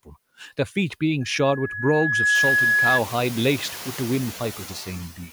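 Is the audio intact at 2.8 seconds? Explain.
No. From 1.20 to 3.01 s a loudspeaker feedback squeal is present. The microphone re-amplifies its own loudspeaker at 1.7 kHz, so a tone swells over about a second to roughly 5 dB above the speech. Noise suppressor artifacts are also present, because the suppressor cuts bands it treats as steady noise by about 11 dB. The room noise that rises at about 2.5 s therefore pumps under the speech.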